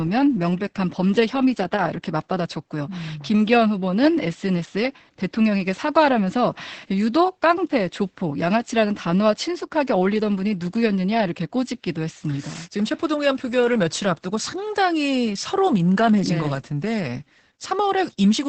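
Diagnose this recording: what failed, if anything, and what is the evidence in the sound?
Opus voice compression runs throughout the clip, at the codec stage. The speech cuts off around 8 kHz and sounds muffled, hoarse and faintly robotic. That fits SILK linear-prediction coding at about 10 kbps, where the excitation is quantised so coarsely that fine detail is lost.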